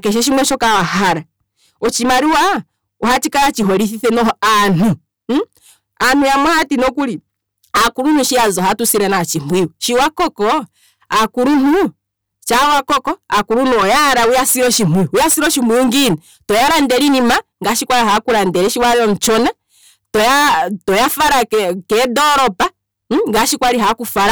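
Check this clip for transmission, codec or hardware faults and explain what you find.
Hard clipping runs through the whole speech recording. Somewhere in the chain the signal was driven about 24 dB past what a stage could pass, so every peak was sliced flat at the ceiling, with nearly a third of all samples hitting the limit. Those squared-off tops generate strong high harmonics, and the result is a continuous harsh fuzz and rasp over every loud sound.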